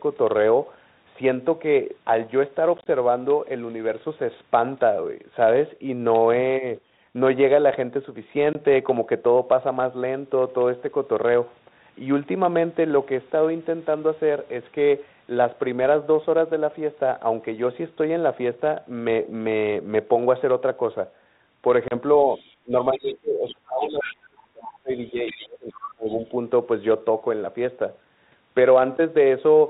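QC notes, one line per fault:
2.78–2.91 s, 8.53–8.56 s, 21.88–21.93 s: packet loss on an ADPCM call. Hard-edged holes appear in the sound. The first has about 50 ms missing, spread over 80 ms in gaps no longer than 20 ms, which points to several short packets dropped. The other two lose about 20 ms and 30 ms. Silence fills each gap. The decoder's running prediction and step size then disagree with the sender's, so the audio resumes slightly distorted before it settles within tens of milliseconds. The band-limited, lightly hissy telephone sound around these holes fits 32 kbit/s ADPCM.
22.16–24.14 s, 24.95–25.48 s, 25.84–26.32 s: the other side's voice leaking through. A second voice sits beneath the main one. It is about 15 dB down in the first and last stretches and about 20 dB down in the middle one. The likely cause is a loudspeaker on the talker's end feeding the microphone, with the echo canceller removing only part of that return.
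22.65–26.32 s: speech suppressed in double talk. The main talker's level pumps down, dropping by up to about 30 dB at its deepest, for roughly 3 s in total across the span. The likely cause is an echo canceller that cannot separate the near talker from the loudspeaker echo during overlap, so it attenuates both together.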